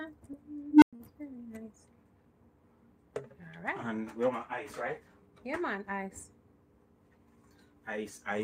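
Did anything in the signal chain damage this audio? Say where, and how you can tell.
Yes. At 0.69 s an unstable filter in the processing stage runs away: a tone of around 300 Hz swells over about 130 ms and clips, then the output collapses to silence for about 107 ms until 0.93 s. A recursive filter with bad coefficients feeds its growing output back into itself until the values overflow and it resets. On a waveform this shows as an expanding envelope that flattens as it clips, then a flat gap. A spectrogram shows one bright horizontal band followed by an empty column.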